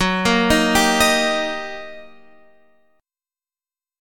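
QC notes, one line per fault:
Nothing to flag here, as there's no fault anywhere in the clip.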